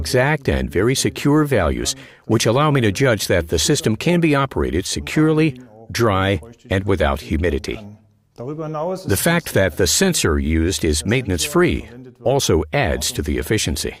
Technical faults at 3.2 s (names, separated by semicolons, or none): none